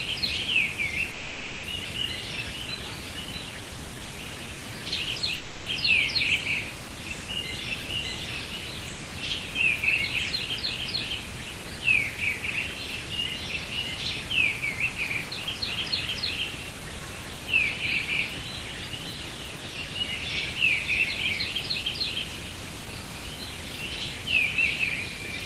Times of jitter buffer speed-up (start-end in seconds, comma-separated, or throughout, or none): 22.50-24.19